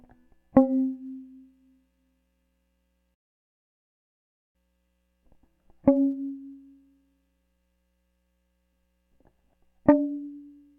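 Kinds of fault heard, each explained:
Playback stall: the music stops dead mid-flow at 3.14 s and the output stays silent for about 1.4 s, with sound returning at 4.56 s. The cut is abrupt rather than faded, with no noise or signal in the gap. The likely cause is the player running short of data or its output thread being blocked, so nothing reached the device until it recovered and resumed feeding audio.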